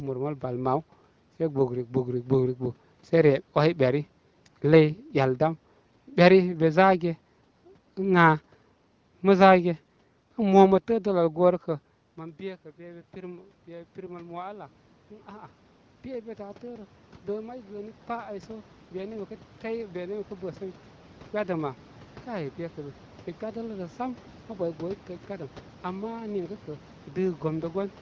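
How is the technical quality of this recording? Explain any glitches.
The recording has two technical faults: a DC offset throughout, and an automatic gain rise from about 12 s.

The DC offset lasts the whole clip. The waveform sits shifted off zero by a constant amount, so it is not centred. You cannot hear it directly. It shows up as steady energy at 0 Hz on a spectrum and eats into headroom, so peaks clip sooner on one side. Mains hum would be an audible 50 or 60 Hz tone with harmonics. This offset is inaudible and has no pitch at all.

The automatic gain rise runs from 12.16 s to 23.05 s. At about 12 s the talker moves away from the microphone, and the input drops by about 19 dB. The automatic gain control reacts by raising its gain by about 16 dB over roughly eleven seconds. The voice climbs back toward its earlier level, and the room noise swells with it. That shared swell separates it from a talker simply leaning in again, which would lift the voice but leave the room noise where it was.

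The wideband call codec runs at 15.85 kbit/s with content up to about 7.1 kHz. It adds only light coding texture.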